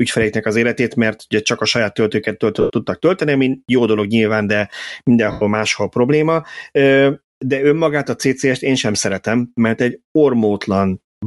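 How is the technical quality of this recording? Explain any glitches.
The recording has two problems: a constant coding artefact across the whole clip, and two brief dropouts.

Throughout the speech, the upper frequencies sound breathy and grainy, with a hiss-like texture in place of clean detail. This is most likely Bluetooth LC3 compression, the LE Audio transform codec. It discards much of the high-frequency content in each short frame and fills the gaps with shaped noise. The damage here is plainly audible, consistent with a stream around 48 kbps using 7.5 ms frames.

At 2.61 to 2.70 s, just before "tudtak tölteni ami jó", and at 5.31 to 5.42 s, just before "máshol probléma", the speech turns into a short noisy smear lasting about 90 ms and about 100 ms. These are lost LE Audio frames. When packets fail to arrive, the decoder repeats the last good spectrum with randomised signs and fades it. 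The result is a grainy blur in place of the missing speech rather than a clean gap.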